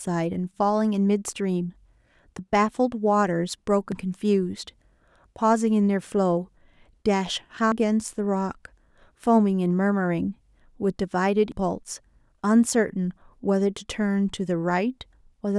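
At 3.92, 7.72 and 11.52 s the speech jumps abruptly forward, each time losing about a fifth of a second with no gap left behind. This regular skipping is likely audio missing between chunks: four-second blocks, with a short piece dropped at each handover.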